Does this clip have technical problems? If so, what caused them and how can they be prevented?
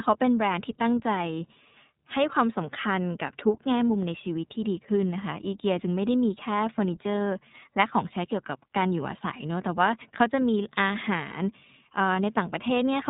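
Yes, the whole speech clip has gone through the iLBC codec. Nothing above about 3.8 kHz survives, and the speech sounds plainly rough and synthetic. That fits the low-rate 30 ms frame mode, with each frame's excitation coded on its own. Keep a wideband codec on the path.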